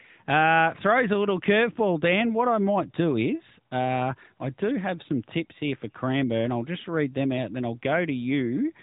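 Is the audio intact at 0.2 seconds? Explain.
No. At 0.2 s, as through the whole clip, the speech carries AMR narrowband mobile codec damage: nothing passes above 3.8 kHz, so a spectrogram shows a hard ceiling there. The vocal-tract model with sparse pulse excitation adds a plainly audible buzzy, synthetic edge, consistent with a mid rate near 10 kbps.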